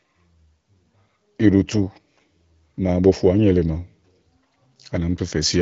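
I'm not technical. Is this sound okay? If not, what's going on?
Yes, this sound is okay, and nothing is going wrong in it.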